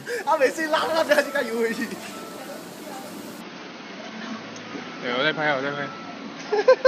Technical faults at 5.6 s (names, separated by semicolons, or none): input switched to a poorer device